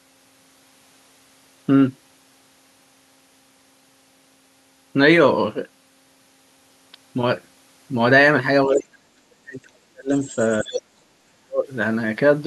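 With both sides likely talking at once, the echo canceller seems to treat the talker as echo and pull the speech down from 8.67 to 10.12 s, a deep drop of roughly 40 dB that leaves it dipping and cutting out. Residual echo likely passes the canceller from 10.24 to 10.34 s, so the other side's voice leaks through faintly, well under the speech. Likely double talk again suppresses the speech from 10.62 to 11.7 s by roughly 35 dB, while a louder scrap of the far side leaks through from 10.65 to 10.82 s.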